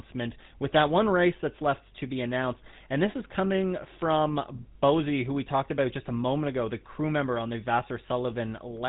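From start to finish the speech carries the sound of the GSM full-rate codec, which fits a 13 kbps GSM full-rate encoding. The codec models the vocal tract as a filter and excites it with a sparse, regularly spaced pulse train that retains only a third of the excitation samples. That coarse excitation gives the voice a plainly audible buzzy, gravelly roughness. Nothing above 3.9 kHz survives, so sibilants and upper harmonics are missing.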